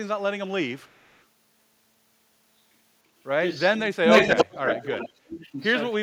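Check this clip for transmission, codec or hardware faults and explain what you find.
Two kinds of fault appear, both tied to echo control on a hands-free call: an echo leak and speech suppressed in double talk.

The echo leak comes twice, from 0.77 to 1.24 s and from 4.09 to 5.12 s. A delayed copy of the speech returns about 0.3 s after the original. The first instance is very faint, far below the speech. The second is strong, about 5 dB louder than the speech itself. The likely cause is a loudspeaker on the far end whose echo canceller let part of the microphone pickup through and sent it back.

Speech suppressed in double talk occurs three times: 3.7 to 4.04 s, 4.45 to 4.66 s, and 4.82 to 5.59 s. The speech dips sharply in patches. The first drop is deep, around 35 dB, lasting about 0.2 s. The second is shallower, around 20 dB. The third runs about half a second and goes down around 30 dB. 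This is likely the echo canceller failing to tell the talker from the returning echo while both sounded together, so it turned both down.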